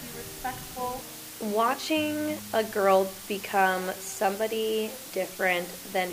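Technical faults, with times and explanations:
Throughout, low bit depth with dither: the audio sits on six bits, so rounding error becomes a steady, even hiss roughly 15 dB below the signal, without the gritty, signal-following distortion of undithered truncation.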